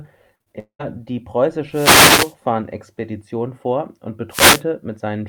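Repeated packet loss (robotic sound) runs from 0.35 to 0.81 s: four gaps, the longest about 200 ms, are patched by stretching the previous sound, leaving roughly two thirds of that span choppy and robotic. Wireless microphone noise hits at 1.71 to 2.34 s and 4.30 to 4.63 s: the radio link fades, so receiver noise swells into a swish of static over the speech.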